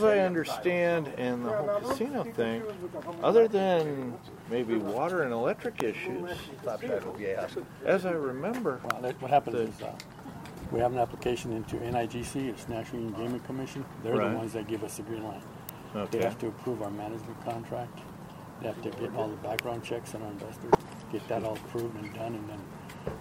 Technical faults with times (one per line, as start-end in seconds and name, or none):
5.80 electrical switching spike
8.90 electrical switching spike
15.69 electrical switching spike
19.59 electrical switching spike